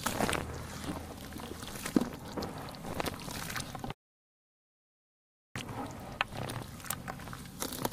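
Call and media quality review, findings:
Input likely lost (device disconnect, link failure or stray mute) while encoder kept writing silence: audio dropout to silence, 3.92–5.56 s, about 1.6 s of total silence, no room tone.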